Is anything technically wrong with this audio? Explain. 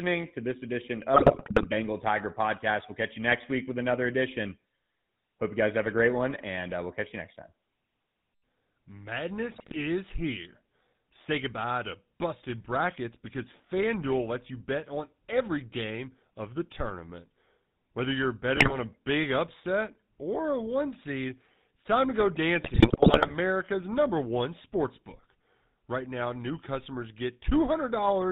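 Yes. The whole clip carries GSM full-rate codec damage, and there are four bursts of GSM bit errors.

GSM full-rate codec: The speech has a buzzy, gravelly roughness from start to end. The codec rebuilds the voice from a vocal-tract model driven by sparse pulses. Nothing above 4 kHz survives. This fits a 13 kbps full-rate stream.

GSM bit errors: These occur at 1.14 to 1.67 s, 9.54 to 9.77 s, 18.56 to 18.77 s and 22.64 to 23.37 s. Corrupted filter, pitch and gain values garble each frame's spectrum and level. The speech breaks into squawks, pops and gargling.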